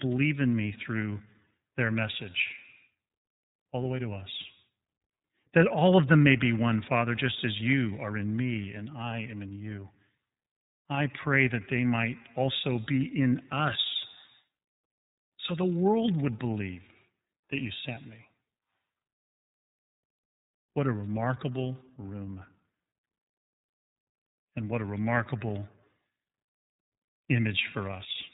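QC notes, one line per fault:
throughout, iLBC codec: the sound stops dead at about 3.8 kHz and carries a plainly audible rough, slightly synthetic grain. That grain points to iLBC coding near 13.33 kbps with 30 ms frames: each frame's excitation is rebuilt on its own. A plain low-pass filter would dull the top without adding this grain. Predictive codecs such as AMR lean on earlier frames instead.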